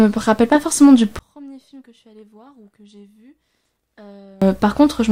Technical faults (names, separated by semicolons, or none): one channel inverted